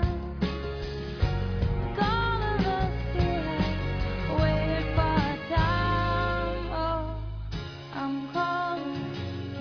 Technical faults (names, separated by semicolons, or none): none